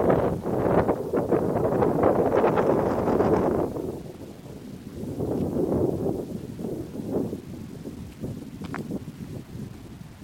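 From start to finish there's a gritty, grainy edge that rides along with the sound, swelling and changing as the sound does, which points to low bit depth without dither. The likely cause is the audio being rounded to very few levels, consistent with about 8 bits, with no dither to smooth the steps. That error sits only around 30 dB below the signal, so quiet passages turn rough.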